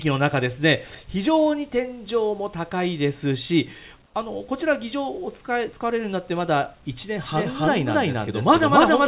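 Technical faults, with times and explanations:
4.06 to 4.14 s: comfort noise in place of the background. For 80 ms the quiet background, about 36 dB below the loud parts, turns into steady, featureless hiss about 5 dB quieter. A call sender likely paused transmission, and the receiver filled the gap with synthetic noise.
7.24 s to the end: doubled audio track. A second full-band copy enters abruptly, about as loud as the original and trailing by about a third of a second. It has no decay or room colour, which likely points to a second capture path.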